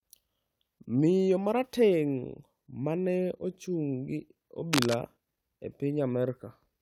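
A speech recording with a burst of cable scratch noise from 4.73 to 4.94 s: a dense, ragged rustle roughly as loud as the speech itself. It is likely a worn cable or connector being moved, its contact resistance fluctuating rapidly for that fifth of a second.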